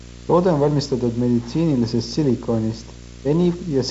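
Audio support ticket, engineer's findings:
Video or display buzz under the speech throughout: 60 Hz field-rate buzz with hash above it, roughly 20 dB below the speech. Screen or video cable coupling into the audio path.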